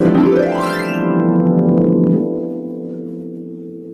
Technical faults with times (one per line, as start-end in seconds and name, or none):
1.20-2.12 hard clipping